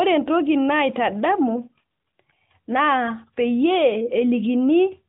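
No technical faults can be heard in this clip.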